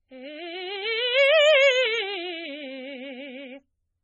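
From start to finish the music sounds watery and swirly, with nothing above about 8.1 kHz, metallic chirps and smeared attacks. This is likely heavy MP3 compression at a very low bitrate, where the encoder drops the treble and switches weak frequency lines on and off between frames.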